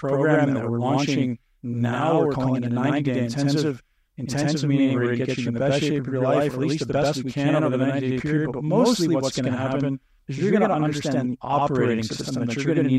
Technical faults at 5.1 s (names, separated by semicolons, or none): channel delay (doubling)